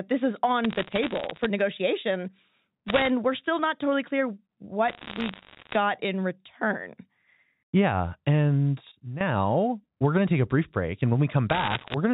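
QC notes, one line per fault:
0.64–1.46 s, 2.88–3.08 s, 4.88–5.76 s and 11.50–11.94 s, bit errors on a digital phone line: bits in the G.711 stream were flipped, at around 1% of bits (a little under in the first run, about 1.5% in the second), so individual samples land at wrong values. A bad sample hit on a high bit or on the sign of a loud sample is a sharp tick, and together they form crackle over the 4 kHz-limited telephone speech. The runs follow "this is", end just before "we're still not totally", and sit between "still not totally clear" and "in return".
8.92–9.21 s, sudden gain jump: the level drops by about 15 dB from one sample to the next and stays down for about 0.3 s. This is likely a digital gain change applied with no ramp. Speech and background noise fall together, so the whole sound steps down rather than fading.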